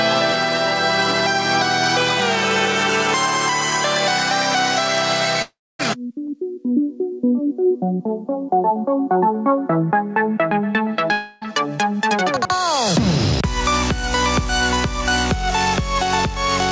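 Gain pumping runs through the whole clip, with the level swinging by something like 10 dB. Quiet and loud passages sit unnaturally close together and the sound feels squashed. The likely cause is input gain set far too high, with a fast limiter or compressor clamping down on every peak and releasing between them. Audio above 8 kHz is absent throughout, consistent with the wideband call codec it passed through.

A long network dropout hits from 5.42 to 5.81 s, when roughly 0.38 s of audio likely never reached the receiver. The receiver stretches the last sound into a fading buzz or hiss, which gives way to about 0.26 s of silence before the audio resumes further on, with the lost stretch gone. A second long network dropout follows from 11.12 to 11.43 s and costs about 0.3 s. This time the concealed, decaying continuation fills nearly the whole gap, so there is no true silence. The audio picks up after it with that section missing.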